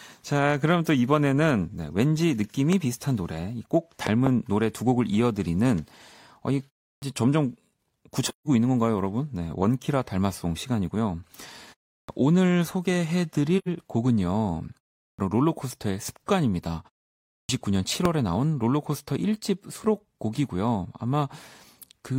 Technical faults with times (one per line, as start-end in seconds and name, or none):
2.73-2.75 loud pop
4.07-4.29 loud pop
6.94-7.02 clipped start after a pause
8.27-8.48 AAC frame loss with muting
11.99-12.09 clipped start after a pause
13.58-13.68 AAC frame loss with muting
15.10-15.19 clipped start after a pause
17.40-17.49 clipped start after a pause
18.05-18.07 loud pop